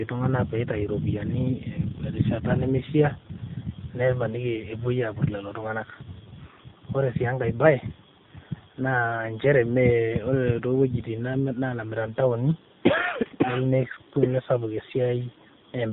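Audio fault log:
Throughout: AMR narrowband mobile codec. Nothing above 4 kHz passes, so the speech sounds thin and boxed-in. The voice is rebuilt from a vocal-tract model and a few pulses per frame. The plainly buzzy, synthetic tone fits a low mode near 7.4 kbps.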